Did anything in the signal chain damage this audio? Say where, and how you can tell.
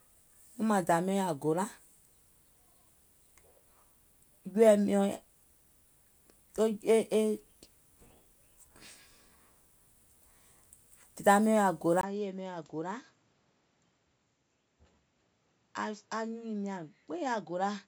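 Yes. At 12.01 s the input was likely switched to a poorer device, at the driver or device-selection stage. A gap of about 20 ms marks the change, and from there to the end the speech sits roughly 10 dB lower and carries a new noise floor some 40 dB down. Nothing is present above 7.6 kHz, so the speech turns dull and boxy because the replacement device passes a narrower band with its own tone.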